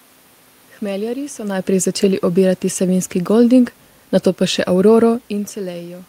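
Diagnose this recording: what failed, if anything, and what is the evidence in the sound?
Nothing failed; no faults found.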